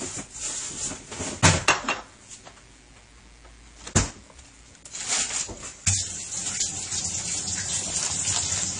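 A mains buzz runs through the whole recording. It sits about 30 dB below the sounds. Sharp switching spikes from a dimmer, rectifier or poor shielding arrive twice per 60 Hz cycle. Their harmonics stack up into a steady, raspy buzz.

From start to end, the top of the spectrum is missing, with nothing above 10.1 kHz. Two sets of compression artefacts smear together. This likely comes from transcoding between lossy codecs, probably a low-rate AAC stage followed by MP3. The later encoder spends bits on the earlier damage.

Hard clipping hits from 1.44 to 1.71 s, overdriven by about 13 dB. It comes back from 8.03 to 8.63 s, by about 5 dB. The peaks exceed what a stage can pass and are sliced flat. The first burst is a harsh fuzz. The second is lighter crackle.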